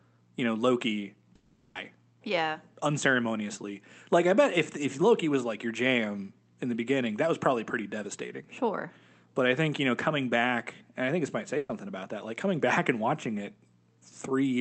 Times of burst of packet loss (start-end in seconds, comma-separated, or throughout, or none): 11.57-11.71